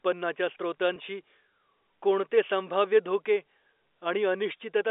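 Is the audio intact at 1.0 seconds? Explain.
No. Just before it, from 0.94 to 0.96 s, packet loss with pitch repetition fills a 20 ms gap by looping the last pitch cycle. It sounds like a brief buzzy hold. The waveform shows identical repeating periods, and the spectrogram shows frozen, flat harmonics.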